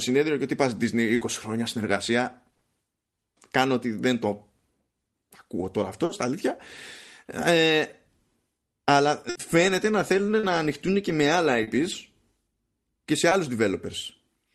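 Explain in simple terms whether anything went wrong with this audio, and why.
Three times the speech turns into a brief held buzz or fading hiss before picking up further on: at 1.15 to 1.23 s, 2.53 to 2.63 s and 9.29 to 9.37 s. This is a burst of packet loss. Around 60 to 80 ms of the call never arrived, so the receiver stretched the last sound to cover it.

Four smaller blips sound like a quick smear or wobble, and a short sound can drop out: at 6.05 to 6.11 s, 10.39 to 10.45 s, 11.63 to 11.69 s and 13.29 to 13.33 s. This is short concealed packet loss. Only 20 to 40 ms was missing, and the receiver patched it over and blended back in.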